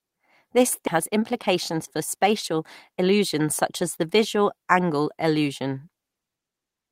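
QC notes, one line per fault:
0.87 s: skip ahead. Playback jumps forward with no fill, dropping roughly 0.4 s of speech and joining the two sides almost directly. Later audio was already queued, so the stretch was discarded rather than waited for, cutting the delay by about the same amount.
2.15 to 3.41 s: jitter buffer speed-up. Speech runs about 6% fast at unchanged pitch and sounds slightly hurried. The receiver was holding excess buffered audio and trimmed short pitch-period slices repeatedly, removing roughly 100 ms in total to bring latency back down.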